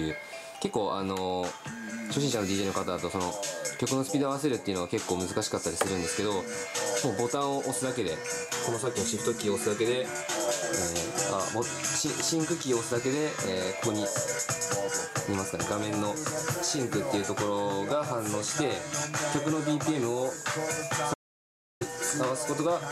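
An audio dropout to silence runs from 21.14 to 21.81 s. The sound cuts off abruptly and about 0.67 s of silence follows, with no room tone, before the audio resumes mid-flow. The likely cause is a brief loss of input while recording continued writing silence.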